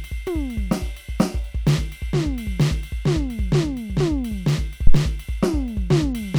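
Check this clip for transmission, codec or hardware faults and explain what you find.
One hardware fault is audible in the music: a phantom power thump from 4.87 s to 4.97 s. It lands as a deep, blunt low-frequency knock that peaks at about -1 dBFS, close to clipping, and dies away within roughly 22 ms. The cause is a supply being switched on or off while the input was live. That sudden DC step ran through the coupling capacitors, and the input chain heard it as a large, fast-decaying pulse.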